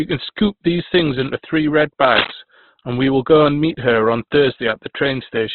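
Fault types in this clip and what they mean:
Opus compression: rough, grainy, band-limited speech with nothing above 4.2 kHz, likely heavy Opus coding, consistent with about 12 kbps, filling starved bands with noise.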